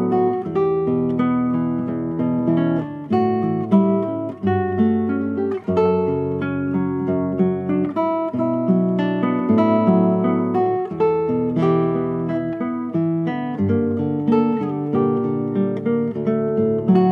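Nothing stood out as a technical fault on listening.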